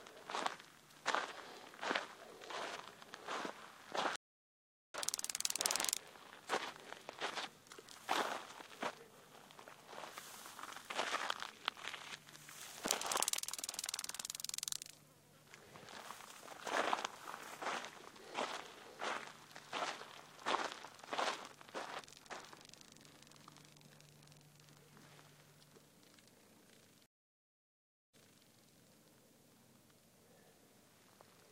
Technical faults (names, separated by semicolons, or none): stream reconnect